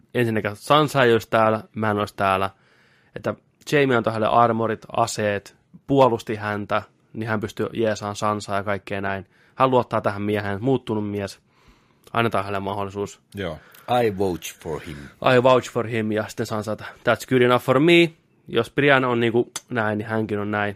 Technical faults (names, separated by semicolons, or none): none